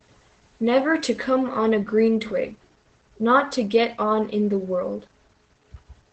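Opus voice compression runs from start to finish across the speech. The codec's SILK linear-prediction mode models the voice and codes its excitation coarsely, and it has limited the band to wideband, leaving nothing above about 8.6 kHz. The missing top end makes the voice sound muffled. The coarse excitation adds a plainly audible hoarse, slightly robotic edge, which fits a low bitrate of around 12 kbps.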